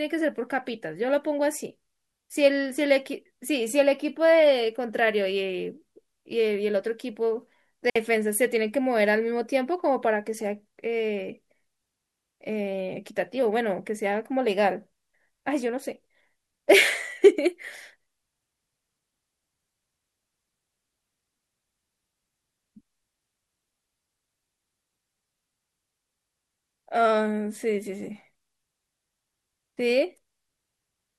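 At 7.90 s the speech drops into a clean hole of near silence lasting 60 ms, ending at 7.96 s, with no click, hiss or burst of noise on either side; the sound simply vanishes and returns. This is a digital wireless dropout: the radio link lost too much data for the receiver to reconstruct, so rather than pass on corrupted audio it muted the output with a very short fade until good data arrived again.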